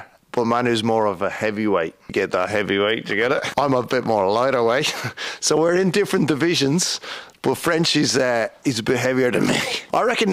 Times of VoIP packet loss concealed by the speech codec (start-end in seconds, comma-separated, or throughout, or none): none